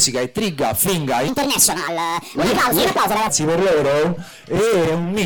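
From 1.28 s to 3.29 s, a section plays at the wrong speed. It runs about 1.51 times faster than it should. Pitch and tempo rise together, so the sound jumps up by about seven semitones and feels hurried. The change is abrupt at both edges. At 3.29 s the normal speed and pitch return just as suddenly. The likely cause is a playback or editing step locked to the wrong clock for that stretch.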